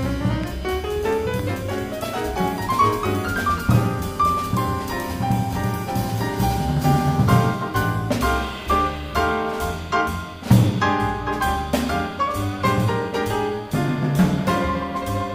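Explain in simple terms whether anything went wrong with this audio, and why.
Loud pops at 0.44 to 0.46 s and 1.39 to 1.42 s: two brief, sharp bursts jump out above the sound, which keeps going underneath. A sudden electrical jolt, likely from a plug, switch or static discharge, got added to the signal.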